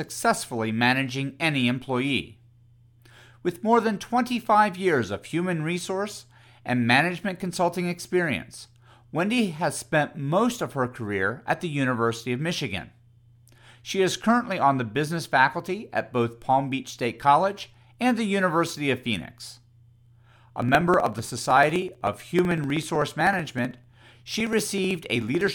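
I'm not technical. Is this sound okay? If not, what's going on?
No. From 20.56 s to 25.47 s there are periodic USB or driver dropouts. The computer briefly stalls the audio every 0.063 s and skips about a millisecond each time. This makes steady, evenly spaced ticks during speech, unlike a loose cable's random crackle.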